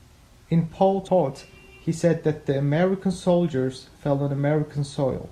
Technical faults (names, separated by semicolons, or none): damaged data in a compressed stream